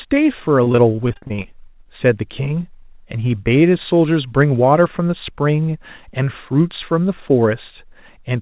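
From 0.64 to 1.46 s, repeated packet loss (robotic sound): twelve short holes, none longer than about 41 ms, patched by stretching prior sound. It is a rapid chop, unlike a single clean dropout.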